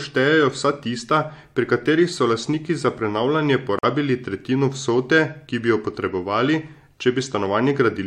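At 3.79 s, just after "so lastniki za prenavljanje", flipped bits left compressed frames in the speech stream undecodable. The decoder rejected them and the player filled the gap with silence, a corrupt frame muted fault. The result is an abrupt hole lasting until 3.85 s, about 58 ms, which fits two consecutive frames dropped. Timing is preserved, so the speech resumes exactly on schedule with "tretjino vsote ki bi".

At 6.47 s a different kind of bit damage occurs. The decoder accepted the damaged data and played it, a corrupt frame decoded fault. Misread gains and codes pushed energy into the wrong frequencies for roughly the span of a couple of frames, ending at 6.49 s. This is heard as a short glitch of about 24 ms laid over the speech, peaking at about -25 dBFS.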